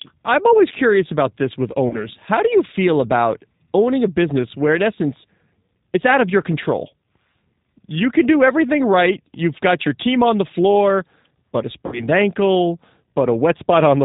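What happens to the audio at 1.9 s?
Just after "curious about this with", VoIP packet loss concealed by the speech codec disrupts the speech from 1.88 to 2.08 s. About 30 ms of audio went missing, which points to a single lost packet. The G.729 decoder filled the gap by extending its last pitch and vocal-tract filter at falling gain, so the sound smears into a brief buzzy tone or coloured noise that fades. Because each frame predicts from the previous one, the speech stays weak or distorted for tens of milliseconds or more after the gap.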